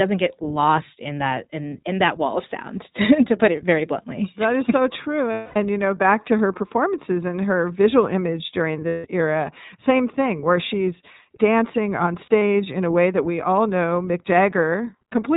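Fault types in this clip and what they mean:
iLBC codec: Clearly rough, slightly synthetic speech with nothing above 4 kHz throughout, from a narrowband VoIP codec that codes each 20 ms frame independently.
lost iLBC frames: Held, buzzy vowel-like sounds at 5.32 s (240 ms), 8.88 s (160 ms) and 12.26 s (short scattered dropouts), where the decoder repeated the last pitch cycle over lost packets.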